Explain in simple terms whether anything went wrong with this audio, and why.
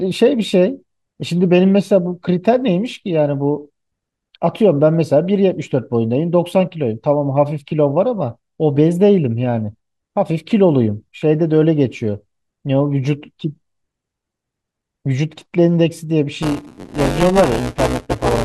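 From 16.42 s to the end of this speech clip, at 18.45 s, there is buffer tearing. The part of the system writing audio and the part playing it have slipped out of step. So roughly a fifth of each small chunk replays sound from about 10 ms earlier. The hard joins cause a robotic buzz at 188 Hz, which fits a 256-sample buffer.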